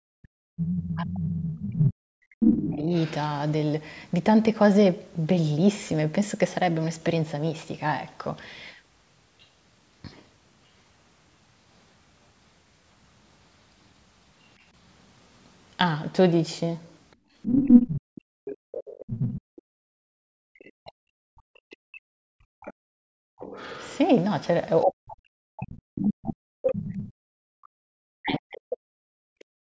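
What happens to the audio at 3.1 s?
At 3.1 s you're hearing the tail end of the other side's voice leaking through, which runs from 0.83 to 3.14 s. A second voice sits in the background at roughly the same level as the main talker, so it's hard to ignore. It's likely the far end playing from the talker's loudspeaker and getting picked up by the mic, with the echo canceller failing to strip it out before the signal went on.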